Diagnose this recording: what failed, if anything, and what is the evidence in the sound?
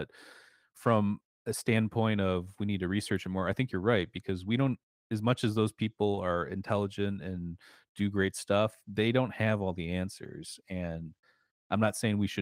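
Nothing failed: the speech shows no audible defect at any stage of the chain.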